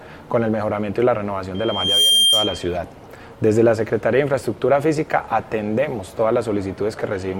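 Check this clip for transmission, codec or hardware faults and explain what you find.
There is one fault: loudspeaker feedback squeal from 1.54 s to 2.76 s. A microphone is picking up the loudspeaker it drives, and at 3.2 kHz the loop gain passes unity, so that frequency keeps recirculating and growing. The squeal swells over roughly half a second into a piercing single tone that sits a few dB above the rest of the sound. That gradual swell sets it apart from a steady electrical whine or interference tone, which would appear at full strength at once.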